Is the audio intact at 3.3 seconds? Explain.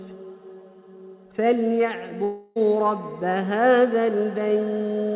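Yes, the audio at 3.3 seconds is intact, carried through the WebRTC call path with its narrow telephone band ending near 4 kHz.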